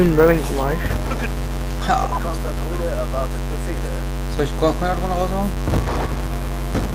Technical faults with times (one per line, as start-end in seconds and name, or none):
0.00-6.94 filter restarted on every block
1.86-6.94 call bitrate drop